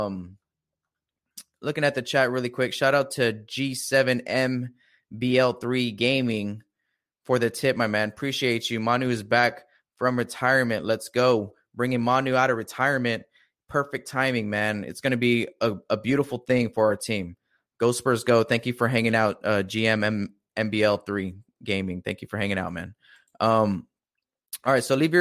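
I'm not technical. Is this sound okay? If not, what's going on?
Yes, it's fine: nothing in this recording sounds broken or glitchy, so there's nothing you need to worry about.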